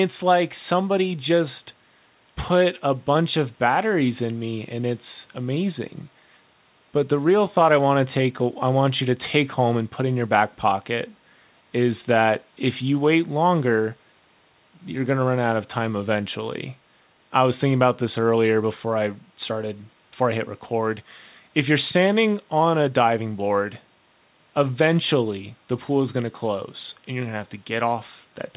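No technical faults are present in the recording; the speech has the narrowband character of a telephone-grade call path, with nothing above 4 kHz, which fits a G.711 A-law codec at 64 kbps.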